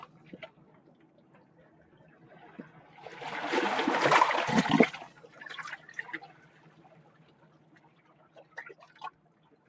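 Across the whole clip the sound pumps and thins, with level swinging by roughly 20 dB as sustained parts and tails sink while sharp onsets push through. This is a noise suppressor applied to music or sounds: a speech-tuned suppressor mistaking steady content for noise.

At 1.02 to 1.58 s, 6.49 to 6.72 s, 7.06 to 8.04 s, and from 9.13 s to the end, the sound dips by about 4 dB, and about 5 dB in the 7.06 s stretch. Each is sound cut by the noise suppressor, judged as noise and pulled down harder than its surroundings, all within the call band that stops at 8 kHz.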